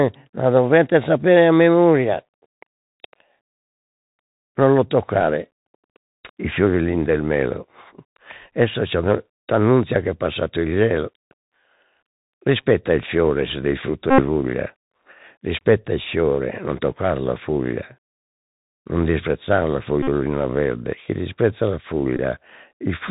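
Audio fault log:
Throughout: Bluetooth CVSD headset codec. The speech is squeezed into the narrowband headset path, so nothing above 4 kHz gets through and it sounds boxy. The codec sends just one up-or-down bit per sample at 64 kHz and adapts its step size. It can't keep pace with fast high-frequency swings, so sibilants come out scratchy and there's a grainy hiss sitting under everything. The damage is plainly audible here.
14.10–14.22 s, 20.03–20.08 s, 22.17–22.19 s: Bluetooth headset packet repeated. There are three dropouts where lost voice packets get filled by replaying the previous packet's bits. The first comes right after "fiore se del frutto" and runs about 79 ms. The second sits between "non disprezzar la" and "verde chi disprezza la" and lasts about 49 ms. The third follows "verde chi disprezza la" and is only about 19 ms long. Each repeat lands every 3.75 ms, which gives a steady buzz around 267 Hz until clean packets resume.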